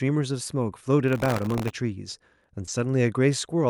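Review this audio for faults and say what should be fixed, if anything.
From 1.08 to 1.71 s there's processor overload crackle: a gritty tearing as the processor keeps missing its buffer deadlines, dozens of them, and each miss replays a scrap of old audio with hard edges. The sound points to a very small buffer, under a millisecond. To prevent it, use a larger buffer or reduce the processing load.

Around 2.65 to 2.69 s there's a short concealed packet loss. About 20 ms never reached the decoder in time, so the receiver extended the previous sound and blended back in, which leaves a brief smear. To prevent it, use a deeper jitter buffer or a steadier network path.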